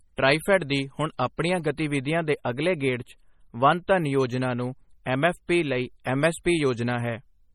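MP3 compression runs through the whole speech clip. The sound is heavily damaged and watery, with nothing above 17.2 kHz, which fits a 32 kbps encode. The likely cause is an encoder starved of bits, zeroing weak frequency lines frame by frame and smearing attacks.

Channel delay (comb filtering) appears from 1.97 to 4.20 s. One channel runs about 4 samples, roughly 0.07 ms, late, and summing to mono cancels shared content at evenly spaced frequencies. The first notch falls around 7 kHz, so the upper range takes on a fixed, hollow colouring.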